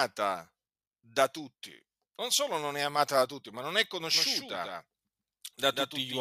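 A slower second path likely mixes the audio in again from 4.15 s, after "tutti ma non è": a doubled audio track, with a quieter, dry copy trailing by roughly 150 ms to the end.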